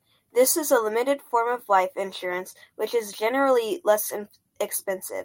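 Speech, with no audible technical fault anywhere in the recording.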